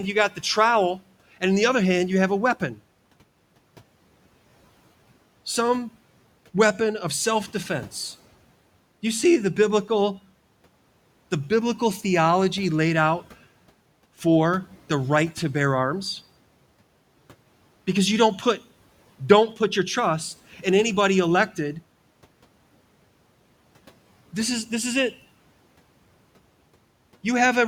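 Between 0.14 and 0.43 s, the opening sounds swallowed, with parts of it dipping by up to about 9 dB for roughly a tenth of a second in total. This is speech cut by the noise suppressor, which mistook quiet speech for the room noise sitting about 28 dB below it.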